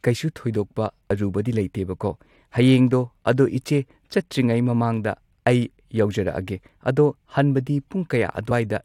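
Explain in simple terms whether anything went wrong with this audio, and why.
Compressed frames skipped at 1.1 s and 8.5 s: small chunks of the compressed audio were lost or rejected as damaged, so the sound jumps ahead by roughly a twentieth and a fiftieth of a second.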